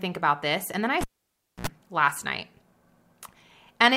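It's a speech clip with a cable pulled and plugged in at 1.01 s: a pop, about 0.61 s of near silence, then roughly 67 ms of 60 Hz mains buzz as the plug's tip touches first, and another pop when the sound returns at 1.67 s.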